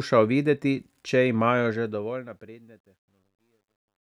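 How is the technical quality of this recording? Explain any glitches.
The recording has one audible fault, on the closing fade. Truncation distortion on a fade runs from 1.64 s, after "videti če", to 4.1 s. The undithered fade, consistent with an 11-bit stage, makes the speech gritty, worst from 2.67 s.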